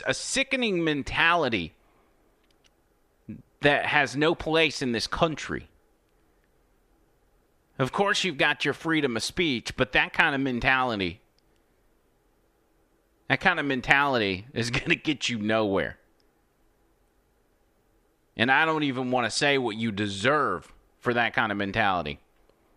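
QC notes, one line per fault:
No faults heard anywhere in this speech recording; nothing to log.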